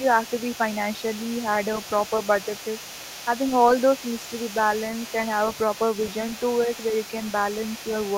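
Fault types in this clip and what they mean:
Other side's voice leaking through: across the whole clip, from 0 to about 8.2 s, a second voice sits well beneath the main speech, roughly 20 dB down. It is most likely the far end being played on the talker's loudspeaker and picked up again by the microphone, with the echo canceller failing to subtract all of it, so a faint residue of the other party rides along with the talker.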